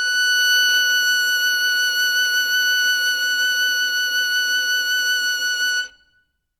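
No technical faults detected.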